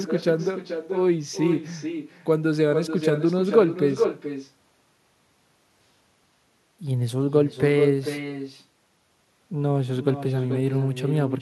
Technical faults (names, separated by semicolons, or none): echo with no canceller